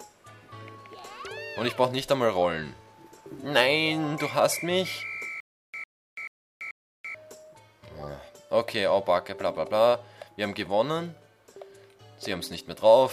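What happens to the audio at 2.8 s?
Nothing goes wrong at 2.8 s; the audio runs through that moment intact, with no dropout, click or other disturbance.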